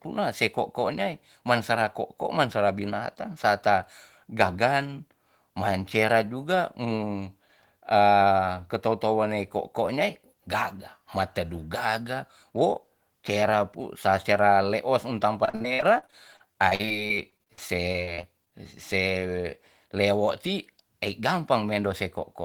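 From 15.45 to 18.53 s the speech turns choppy, with bits dropping out. This is repeated packet loss: a rapid run of holes, none longer than 50 ms, each patched by stretching the previous sound, covering about a fifth of the stretch.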